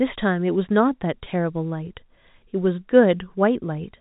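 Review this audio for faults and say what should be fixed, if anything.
Packet loss with pitch repetition occurs at 1.24 to 1.26 s, where about 20 ms of the speech signal drops out, which fits a single lost packet. The receiver bridges the gap by repeating the last pitch period, so the sound briefly holds with a slightly buzzy, static quality before normal speech resumes. The G.711 telephone coding's band limit below 4 kHz is audible throughout. To prevent recurrence, add a jitter buffer and forward error correction, or improve link reliability.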